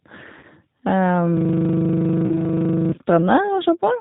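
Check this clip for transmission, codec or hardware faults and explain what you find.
Three kinds of fault are audible in this speech: codec damage throughout, two concealed packet-loss gaps, and a long hang loop.

G.729 codec: The whole clip sounds band-limited, slightly rough and synthetic, with nothing above 4 kHz. The speech is rebuilt from a vocal tract filter, a pitch predictor and a few pulses per frame. The damage is plainly audible and fits G.729A at 8 kbit/s.

VoIP packet loss concealed by the speech codec: From 0.39 to 0.45 s, and again from 2.27 to 2.53 s, the speech smears into a fading buzzy or noisy tone. The decoder filled the missing audio, about 40 ms and then 30 ms (consistent with four and three 10 ms frames), by extrapolating its last pitch and filter with falling gain. The speech stays weak briefly afterwards.

System hang loop: From 1.37 to 2.92 s, one 40 ms slice of audio repeats exactly, about 39 times, as a rapid repetition at 25 Hz. 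The system froze while the sound hardware kept cycling through the same ring buffer. The second concealment gap falls inside this stretch.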